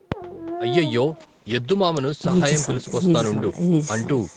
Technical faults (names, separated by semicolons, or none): echo with no canceller; call bitrate drop